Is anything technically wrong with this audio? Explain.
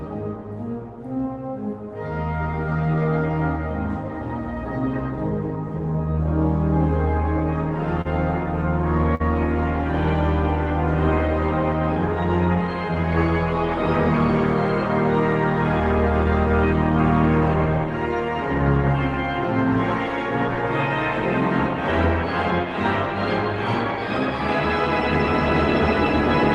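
Yes. Short stalls from late packets occur at 8.01–8.07 s and 9.15–9.22 s: packets arrived late, so the receiver stretched the preceding sound by 35 ms and 50 ms before resuming without loss.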